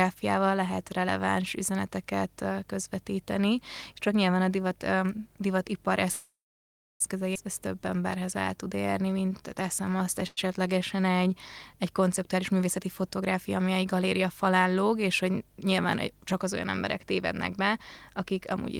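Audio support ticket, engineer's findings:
Call audio freeze, 6.11–7.02 s and 10.27–10.39 s. First gap 887 ms, last sound stretched into a fading buzz, then about 660 ms of silence. Second gap 101 ms, short fill. Likely delayed packets draining the jitter buffer. Audio resumes where it stopped, nothing lost.

Skip ahead, 7.34–7.37 s. Playback jumps forward with only a 10 ms fill. Roughly half a second of audio dropped and the two sides joined almost directly. Audio was lost in transit or discarded by the jitter buffer on overflow, cutting the added delay.

Jitter buffer slow-down, 7.60–11.32 s. Playback runs at 90% speed with pitch unchanged, so sounds are audibly drawn out. 379 ms was added by repeating single pitch periods many times over, rebuilding the buffer reserve.

Jitter buffer speed-up, 12.34–13.56 s. Playback runs at 109% speed with pitch unchanged and sounds hurried. Roughly 100 ms was removed by dropping short pitch-period pieces repeatedly, trimming excess buffered delay back toward target.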